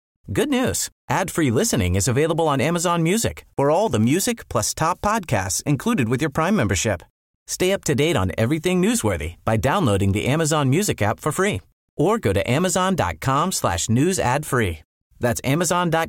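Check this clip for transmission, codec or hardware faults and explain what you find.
One transmission fault is present in this speech clip.

Block size mismatch (padded), 4.01 to 5.11 s, between "for all the" and "included with your": one stage delivers short blocks to a stage reading larger ones, which fits a 1024-sample read block, and zeros fill each remainder. The gaps produce a 43.1 Hz buzz, with speed barely changed at 0.999x and pitch about normal.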